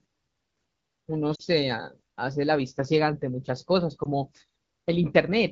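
At 1.35 to 1.41 s the speech briefly smears and dips, and at 4.03 to 4.08 s a shorter warble passes. These are lost AMR speech frames. Corrupted frames failed their check, so the wideband decoder, which codes the speech up to 6.4 kHz, stretched the last good pitch and vocal tract settings at falling gain. The first gap sounds like about two frames, the second like about one.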